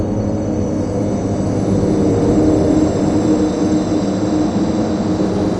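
Nothing stood out on listening to this sound recording, with no technical fault audible at any point.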